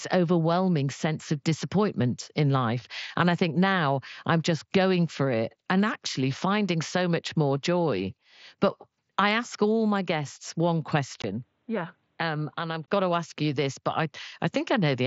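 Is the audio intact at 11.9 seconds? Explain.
No. From 11.22 to 12.88 s, between "all my guests one" and "got to ask you", the sound turns dull and boxy, with nothing above 4.6 kHz against the wider mSBC headset band around it. A 20 ms gap opens at the switch, the level falls by about 5 dB, and a new noise floor appears, roughly 40 dB below the signal. This is likely an input switched to a poorer device with a narrower band and its own noise.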